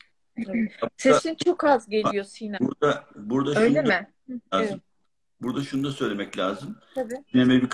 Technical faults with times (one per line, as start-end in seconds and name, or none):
5.44-7.18 resampler restarted on every block